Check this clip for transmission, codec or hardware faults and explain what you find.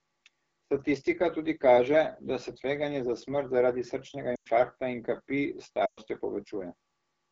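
Two kinds of fault are present: AMR wideband (HD Voice) codec damage throughout the speech, and two runs of lost AMR speech frames.

The AMR wideband (HD Voice) codec coloring is plainly audible for the whole clip. AMR-WB models the vocal tract and drives it with pulses up to 6.4 kHz, then fills the band to 7 kHz with shaped noise. The rough, raspy texture points to one of its two lowest modes, which fits about 8.85 kbit/s. At that rate the excitation is too coarse to reproduce the voice cleanly.

Lost AMR speech frames occur twice. The first runs from 4.35 to 4.47 s, about 100 ms, between "za smrt zaradi srčnega" and "in kapi". The second runs from 5.85 to 5.99 s, about 120 ms. Frames damaged in transit failed their checks, so the decoder repeated the last good pitch and vocal tract settings at falling gain. The sound quickly drops to near silence, then returns briefly weak or rough. The gap lengths fit five and six lost 20 ms frames.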